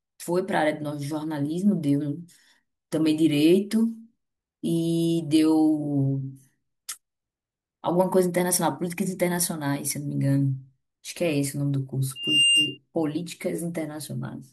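Loudspeaker feedback squeal appears in this speech clip from 12.15 to 12.78 s: a single 2.8 kHz tone swells over about a third of a second to roughly 5 dB above the speech. A microphone is hearing its own loudspeaker, and the loop's gain exceeds one at that frequency.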